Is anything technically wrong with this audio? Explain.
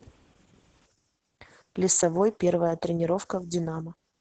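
Yes. Throughout, the speech shows heavy Opus voice compression. The SILK coder has narrowed the band to about 8 kHz and coded the excitation coarsely, which fits a bitrate near 10 kbps. The voice sounds muffled, hoarse and slightly robotic.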